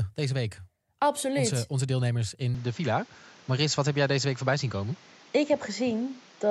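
From 2.55 s to the end, the speech loses everything above 7.6 kHz and turns duller, with no gap or level jump, and a faint new background noise appears. This is likely the input switched to a poorer device. On a spectrogram, energy stops at a flat 7.6 kHz ceiling from that point on.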